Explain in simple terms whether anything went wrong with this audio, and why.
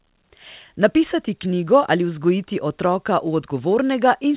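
Nothing went wrong here; it's ordinary telephone-quality speech.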